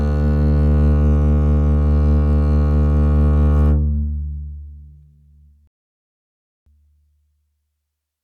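Rebuffering stall at 5.67 s in the music: the player ran out of data, went silent for 0.99 s, then resumed exactly where it stopped.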